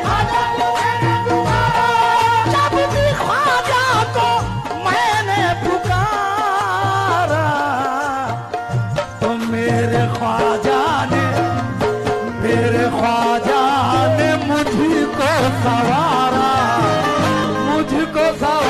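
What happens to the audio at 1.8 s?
Nothing goes wrong at 1.8 s; the audio plays through that moment intact, with no dropout, click, glitch or other fault.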